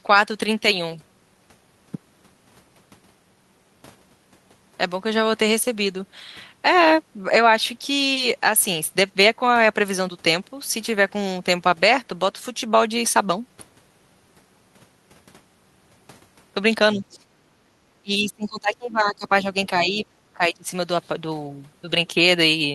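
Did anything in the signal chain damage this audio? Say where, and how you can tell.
Yes, in the call processing. The speech dips repeatedly between 16.94 and 20.69 s: at 16.94–17.27, 17.62–17.78, 18.02–19.46 (the longest, around a second and a half), 19.69–20.06 (only a slight dip) and 20.33–20.69 s. The deepest cut, around 35 dB, is at 17.62 s. That on-off pattern is likely speech suppressed in double talk: with both ends talking, the echo canceller couldn't tell this talker from loudspeaker echo and attenuated both.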